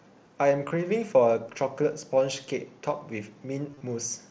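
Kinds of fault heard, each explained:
Concealed Bluetooth headset packet loss: packets travelling from headset to phone went missing, and the receiver filled each gap by repeating the best-matching recent stretch of waveform. Around 0.69 to 0.71 s a run of three lost frames, about 22.5 ms, gives a short buzzy held tone. From 3.70 to 3.81 s several losses scattered over about 105 ms give a brief buzzy, held tone with a slight warble as real audio returns. Unlike a plain dropout, the level never falls to silence.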